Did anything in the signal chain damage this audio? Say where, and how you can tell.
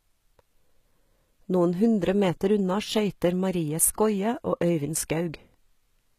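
Yes, at the codec stage. The treble sounds bright but synthetic throughout, with gritty, lispy s sounds and nothing above 14.9 kHz, which fits HE-AAC compression at something like 20 kbps. The top band is likely rebuilt from copied lower bands, so its harmonics don't line up.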